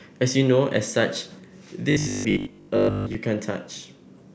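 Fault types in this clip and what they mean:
Robotic sound from repeated short buffers: from 1.91 to 3.21 s the speech becomes a rigid metallic buzz at 50 Hz, likely a 20 ms chunk replayed while most real audio is skipped. Unlike a dropout, there is no silence, only a fixed-rate buzz roughly tracing the words.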